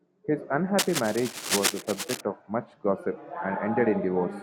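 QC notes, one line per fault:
0.78–2.21 s, cable scratch noise: uneven crackling rustle, only slightly quieter than the speech, ending just before "of much gossip". Likely a worn cable or connector moving, its contact resistance jumping rapidly. Spectrogram shows broadband vertical speckle; waveform, jagged spiky bursts.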